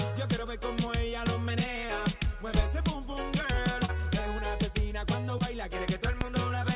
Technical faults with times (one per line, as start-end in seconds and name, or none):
2.59-2.62 loud pop
3.85-3.90 short concealed packet loss
5.38-5.42 short concealed packet loss
6.21-6.25 loud pop